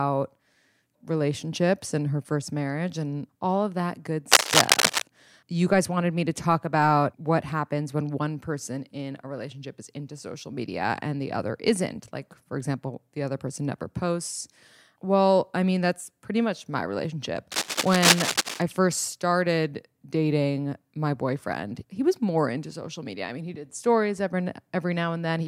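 At 4.32 to 5.02 s and again at 17.52 to 18.62 s, a dense, ragged scratching rides over the speech, loud enough to sit above it the first time and level with it the second. This is cable scratch noise, likely from a worn cable or connector being moved so its contact resistance jumps about. Unlike isolated clicks or steady hiss, it comes as short, uneven rustling bursts that start and stop with the movement.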